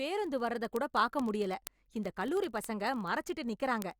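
From 0.11 to 3.98 s, steady ticks recur roughly every 20 ms. These are word clock ticks, caused by an unlocked receiver clock slipping one sample each time.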